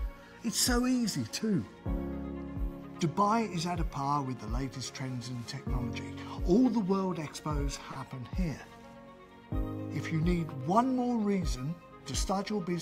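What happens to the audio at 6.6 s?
Nothing goes wrong at 6.6 s; the audio plays through that moment intact, with no dropout, click or other fault.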